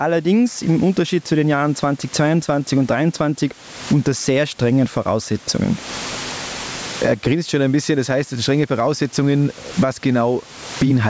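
From start to finish there's gain pumping: the level gets pulled down on every loud sound, swinging by around 25 dB. It's likely the input gain was cranked far too high and a fast limiter keeps clamping it, which squashes everything.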